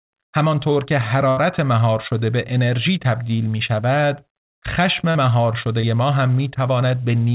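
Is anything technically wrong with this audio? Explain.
Yes. At 1.29 to 1.38 s there is a burst of packet loss. About 80 ms never arrived, so the receiver continued the last sound, turning it down as the gap went on, and then skipped ahead. On a spectrogram this shows as a held continuation of the last sound that fades before the speech resumes.

At 5.11 to 5.16 s and 5.81 to 5.84 s there is short concealed packet loss, about 40 ms and 20 ms. Each gap was patched from the preceding sound, so it is heard as a brief smear or wobble. In the waveform it appears as a short, too-regular stretch.

Across the whole clip, the call path's band limit leaves the spectrogram empty above 4 kHz, which fits G.711 telephone coding.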